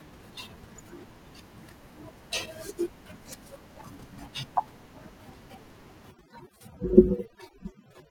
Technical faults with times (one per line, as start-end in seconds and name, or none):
6.11-8.10 overdone noise removal